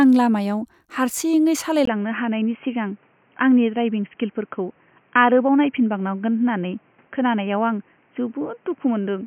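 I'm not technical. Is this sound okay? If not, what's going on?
No. At 1.85 seconds the speech suddenly turns dull and boxy, and it stays that way to the end. There is a tiny gap right at the change. The loudness barely shifts, but a faint new background noise appears. Everything above about 3.2 kHz is gone, so the crisp sounds lose their sharpness. This is likely an input switched to a poorer device, such as a headset or another microphone taking over mid-recording.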